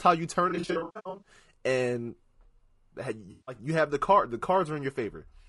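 Throughout the speech there is a rough, grainy texture, with noise filling the gaps between harmonics and a top band that sounds thin and synthetic. The likely cause is low-delay AAC compression of the AAC-ELD kind at around 32 kbps. Its short frames cannot resolve the pitch harmonics cleanly, and at this low bitrate bits run short. On a spectrogram the harmonic stripes look smeared and speckled, and the upper band looks blocky and less detailed.

From 0.49 to 1.29 s there is AAC frame loss with concealment. About 460 ms of audio drops out in scattered gaps over 720 ms, and the longest gap runs roughly a tenth of a second. The decoder patches each gap from the last good spectrum, so the sound turns phasey and noisy in stuttering bursts. The waveform shows patches of flattened, fading envelope, and the spectrogram shows smeared, striped blocks in place of clear harmonics.

A second loss runs from 3.31 to 3.55 s, 160 ms long, just before "you have the card". 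It is heard as a smeared, hissy patch. On the spectrogram it appears as a short band of blurred energy without harmonic structure.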